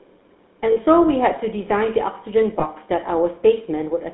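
The whole clip has gone through the GSM full-rate codec, and it's plainly audible. The line band runs from about 250 Hz to 3.7 kHz, so the speech sounds thin and boxy. The codec rebuilds the voice from a vocal-tract model driven by a sparse pulse excitation, and that thinned-out drive gives the speech its buzzy, gravelly roughness. The bit rate it points to is the 13 kbps full-rate mode.

Then there are two spots with lost GSM frames. The first, at 0.72 to 0.77 s, lasts 40 ms, which fits two frames going missing. The decoder keeps replaying the last good frame's settings, so the sound hangs there as a brief metallic, rough ring. The second, at 2.6 to 2.65 s, is 20 ms, which points to a single frame. It's the same concealment, just shorter, a quick rough, metallic ring.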